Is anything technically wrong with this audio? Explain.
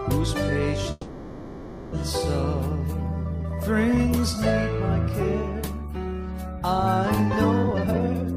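Yes, there are two faults. From 0.91 to 1.94 s, a call audio freeze: packets were likely delayed and the jitter buffer emptied, so the last sound is stretched into a fading buzz or hiss for about 1.01 s before playback resumes where it stopped. From 7.63 s to the end, a jitter buffer speed-up: the receiver trims pitch-period slices to shed the backlog, cutting roughly 0.7 s so the audio runs at 194% speed, hurried but at unchanged pitch.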